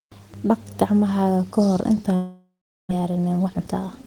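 From 2.15 to 2.93 s the speech smears into a fading buzz or hiss, then goes silent. It's likely a long network dropout, with about 400 ms lost outright. Right after, from 3.00 to 4.03 s, a jitter buffer speed-up snips out pitch-period slivers to clear roughly a third of a second of backlog, so the speech runs about 24% fast at unchanged pitch and sounds hurried.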